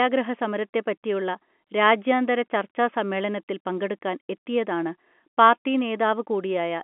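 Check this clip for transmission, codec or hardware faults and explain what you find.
No transmission, codec or hardware faults are audible here.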